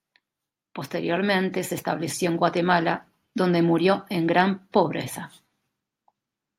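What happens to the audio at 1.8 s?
At 1.8 s you're in the middle of an automatic gain rising stretch, running from about 0.91 to 2.59 s. The gain control decided the input was too quiet and eased its level up by about 6 dB, so the talker and the background noise swell together.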